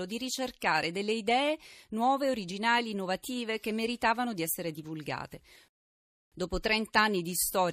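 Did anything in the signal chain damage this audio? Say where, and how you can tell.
Yes: a rebuffering stall at playback. The speech drops to silence from 5.68 to 6.32 s, then resumes exactly where it stopped, adding 0.63 s without losing content.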